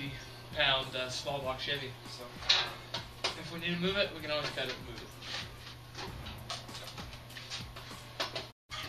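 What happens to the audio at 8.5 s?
A digital broadcast dropout runs from 8.50 to 8.71 s. The receiver stopped getting decodable frames and muted its output, so the audio fades to silence over about 20 ms and stays silent until valid frames resume. Roughly 168 ms of programme is gone, which fits a run of several consecutive lost frames.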